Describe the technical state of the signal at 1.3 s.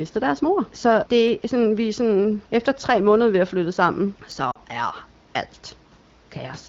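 At 1.28 s there is a single sharp click, a thin vertical line across the spectrum, most likely from dropped samples: a handful (roughly four, about a tenth of a millisecond) go missing, so the waveform jumps abruptly. Unlike a dropout, the loss is far too brief to remove any audible sound.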